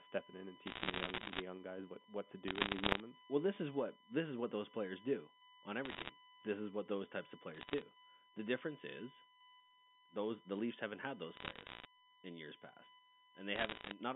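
It's a speech recording carried over a phone line, and under the whole thing there's a steady USB whine at 1 kHz, sitting roughly 25 dB below the speech. That fixed pitch is what you get when the USB bus's 1 ms frame activity bleeds into the audio through shared power or ground. On top of that, there are bursts of bit errors on a digital phone line, heard as sharp ticks and crackle over the speech at 0.66–1.42 s, 2.48–3.0 s, 5.85–6.1 s, 7.54–7.82 s, 11.36–11.85 s and 13.56–13.94 s. Somewhere between half a percent and a percent and a half of the bits get flipped there, and each flip corrupts a single sample. The narrow band and the absence of anything above 4 kHz point to a G.711 telephone link, which itself shows little or no coding damage.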